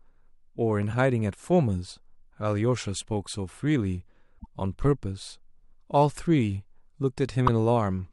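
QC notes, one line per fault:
4.35–4.46 s: damaged data in a compressed stream. Corrupted frames upset the decoder for about 110 ms, producing a brief glitch while it resynchronises.
7.47 s: damaged data in a compressed stream. A shorter corrupted stretch, under 20 ms, gives a quick glitch as the decoder misreads the frame.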